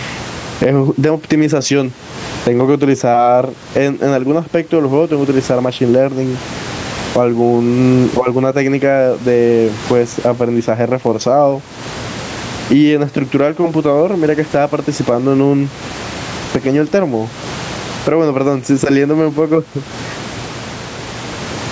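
Throughout, gain pumping: gain likely set far too high makes a limiter swing levels roughly 20 dB; loud and soft parts end up closer in level, and the sound is squashed.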